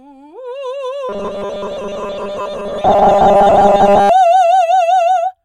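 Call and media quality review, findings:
Robotic sound from repeated short buffers, 1.09 to 4.09 s. Music becomes a metallic 200 Hz buzz. Likely a starved buffer looping 5 ms chunks, skipping most real audio.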